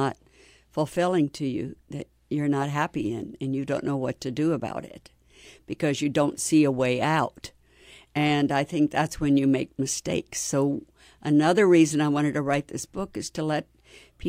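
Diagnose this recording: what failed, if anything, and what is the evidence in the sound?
Nothing in the speech recording points to a failure anywhere in the chain, so there's nothing here to diagnose.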